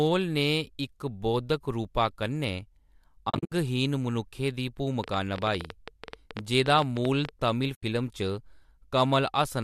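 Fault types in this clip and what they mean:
AAC frame loss with muting: lost frames become silence with faded edges, so the holes near 3.3 s and 7.75 s sound soft.
Train of clicks: about thirty same-shaped pulses, roughly 10 dB above the speech, tick unevenly near 12 per second from 5.0 to 7.3 s, likely interference.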